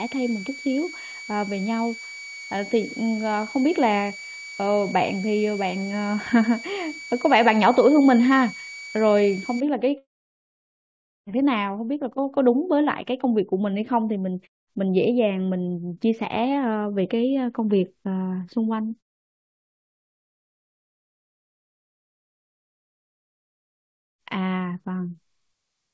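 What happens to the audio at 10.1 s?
You're in a long network dropout from 9.98 to 11.29 s. Packets were likely lost, so the last sound fades as a buzz or hiss into about 1.2 s of silence.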